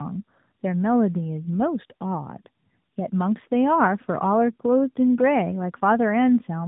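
Throughout the speech, tandem speech coding is audible: the sound was decoded and re-encoded across links, which fits two AMR-NB-type narrowband coders in a row. Nothing reaches above 3.8 kHz, but unlike a single low-bitrate pass, the warbling roughness is compounded and more muffled.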